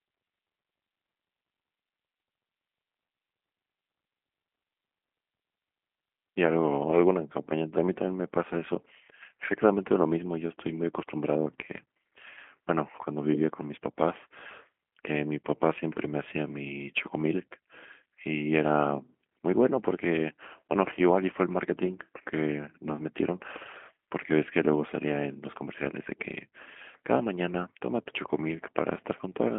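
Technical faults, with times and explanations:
Throughout: G.729 codec. The speech is rebuilt from a vocal tract model plus a few pulses per frame, giving a rough, slightly synthetic tone consistent with an 8 kbit/s G.729A coder. On a spectrogram, energy stops sharply near 3.5 kHz, with little energy below 200 Hz.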